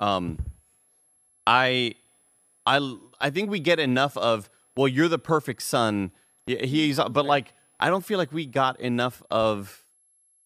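Speech runs over a faint switching supply whistle for the whole clip, a high tone wandering between 10.9 and 11.2 kHz at roughly 40 dB below the speech. A power converter drifting into audible burst mode causes it, and that drifting pitch sets it apart from a fixed-frequency whine.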